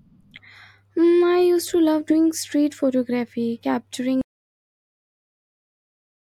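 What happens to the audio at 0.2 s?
Nothing goes wrong at 0.2 s; the speech plays through that moment intact, with no dropout, click or distortion.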